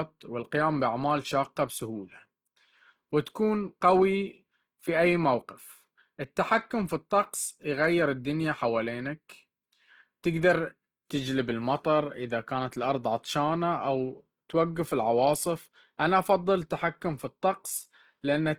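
Across the whole speech clip there is plainly audible Opus compression damage, likely from encoding in Opus's music (CELT) mode at a bitrate that sounds near 16 kbps. Energy is kept in every band, with starved bands filled by folded or noise content, so voiced sounds come out rough and grainy rather than swirling or watery as MP3 would. The audio stays fullband, with nothing above about 20.2 kHz, so it isn't muffled like Opus's narrower speech mode.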